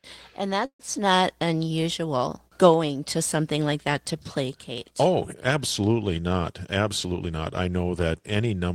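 Around 0.65 s the speech stalls until about 0.81 s in a call audio freeze, likely from packets held up in transit so the jitter buffer ran dry. The last sound trails on as a fading buzz, then roughly 90 ms of near-silence, and the speech picks up exactly where it stopped, now about 140 ms later, with nothing skipped.

At 4.78 s there's a tiny repeated buffer: one short slice of audio plays twice back to back with a hard join, which fits a 10 ms buffer being replayed because fresh audio wasn't ready. At that size it comes across more as a quick click or blip than a real stutter.

From 6.59 s to 7.84 s there's a jitter buffer speed-up. The receiver was sitting on more audio than it wanted, so it shaved out pitch-period-sized bits over and over, around 150 ms in all. The speech runs at about 111% speed with the pitch unchanged, so it sounds a bit rushed.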